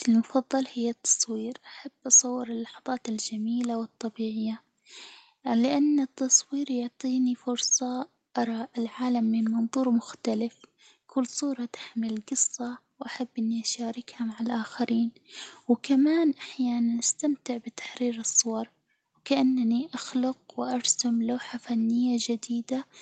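No technical faults can be heard in this speech recording. The call's microphone processing and codec leave nothing above about 8 kHz, so the top end sounds band-limited in the way an Opus call at a moderate bitrate does.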